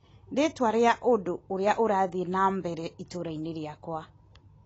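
Speech throughout, and it sounds like it's been through AAC compression at a low bitrate: nothing comes through above 8 kHz, so it's dull, and the sibilants have that smeared, fizzy, warbling edge. That fits a coarse AAC-LC encode, likely somewhere around 24 kbps.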